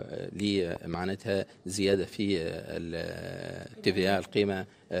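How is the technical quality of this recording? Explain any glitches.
A loud pop, two in quick succession from 0.76 to 0.96 s, roughly 10 dB above the sound; likely a voltage pulse from a plug or switch.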